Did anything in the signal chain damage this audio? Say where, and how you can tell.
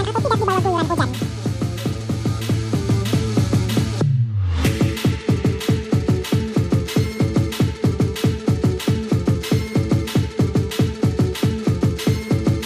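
Yes. The damage is at the sample-format conversion stage, where the audio was read two samples at a time (double speed) from start to finish. It plays at exactly 2x with pitch raised 12 semitones, a full octave. The reader treated pairs of samples as single frames, as if the data were stereo or twice as wide, and skipped half of them. This differs from an ordinary sample-rate mismatch because skipping samples without filtering folds any strong content above a quarter of the sample rate back down.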